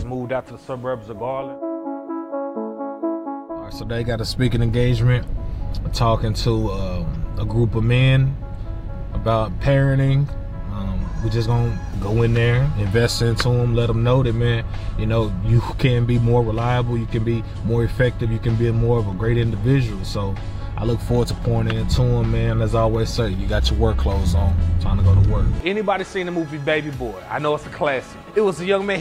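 No technical faults can be heard anywhere in this clip.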